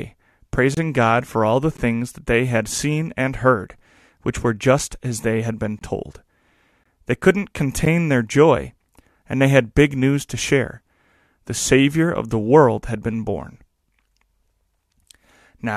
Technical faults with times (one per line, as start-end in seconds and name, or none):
0.74-0.77 gap between stream segments
1.77 gap between stream segments
2.78 gap between stream segments
3.79 gap between stream segments
4.79 gap between stream segments
5.79-5.81 gap between stream segments
6.84 gap between stream segments
7.85 gap between stream segments